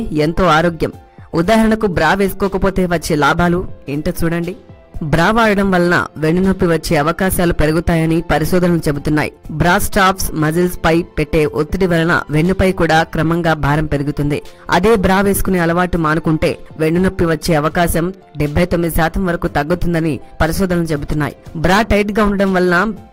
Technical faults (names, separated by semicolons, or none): none